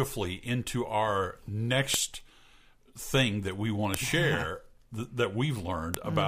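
Two-second pieces of the audio were joined with their WAV headers left in place, so the header bytes play as samples: a file header played as audio. Each joint sounds as a sharp, loud click or snap, at 1.94 s, 3.94 s and 5.94 s.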